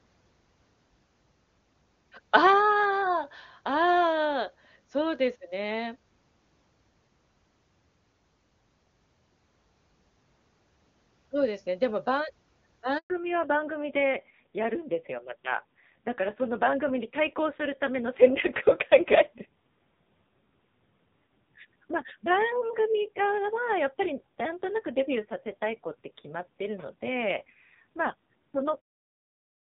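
Handover gap, 12.98 to 13.10 s: the speech cuts out for about 120 ms as the call is passed from one network link to another. During the switch no speech frames reach the receiver, so the sound decays within a few tens of milliseconds into a short dead silence. Whatever was said in that window is simply missing. Sound resumes only once the new connection begins delivering audio.

Fallback to narrowband, from 13.10 s to the end: after the gap, the call no longer uses wideband HD Voice coding. Before the handover it sounds clear, with faint or no codec roughness, which fits a high-rate AMR-WB mode of around 23.85 kbit/s. Afterward there is nothing above 4 kHz, so the speech turns muffled and boxy. The grainy texture points to a low-rate AMR-NB mode of around 5.9 kbit/s. This reduced quality persists into the smooth fade-out at the clip's end.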